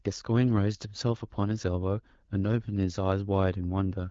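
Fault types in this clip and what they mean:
There are no fault types in this clip, so there is nothing to explain.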